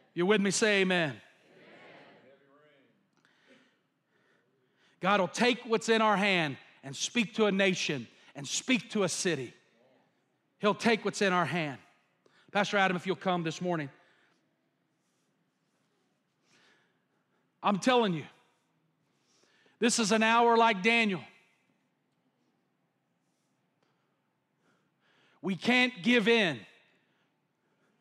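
Nothing goes wrong anywhere in this speech recording, so there's no technical fault to point to.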